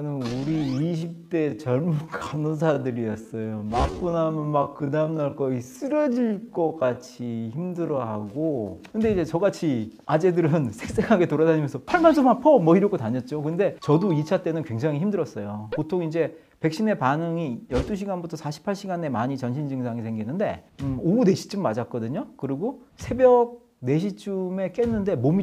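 From 0 to 8.8 s the audio plays as a time-stretched section, slowed to about 0.58 times its normal pace. The pitch holds steady. Short pieces were likely repeated to fill the length, so it drags. At 8.8 s the pace jumps back abruptly.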